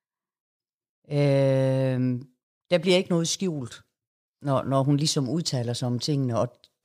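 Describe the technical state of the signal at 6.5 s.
At 6.5 s the speech signal is intact, with no audible fault at that moment.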